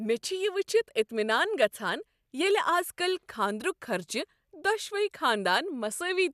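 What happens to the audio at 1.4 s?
Nothing goes wrong at 1.4 s: the speech carries on intact through that moment, with no dropout, click, distortion or other fault to be heard.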